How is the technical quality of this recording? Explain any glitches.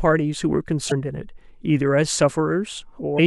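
Two brief glitches break up the speech, at 0.88–0.92 s and 3.15–3.19 s: short blips from damaged data in a compressed stream, where corrupted frames made the decoder lose sync.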